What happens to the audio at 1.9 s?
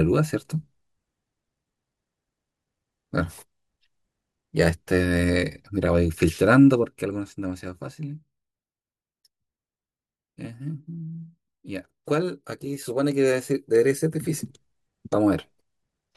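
Nothing goes wrong at 1.9 s: the speech plays through intact at that point, with any level change there as smooth and gradual as a fader move.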